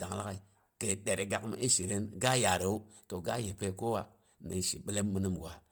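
Throughout the speech there is a heavily grainy, breathy edge, likely from Bluetooth LC3 compression at a rate that fits 32 kbps. Its 10 ms frames drop upper-band detail and substitute noise, so a spectrogram shows blotchy, speckled high-frequency texture extending to 20.1 kHz.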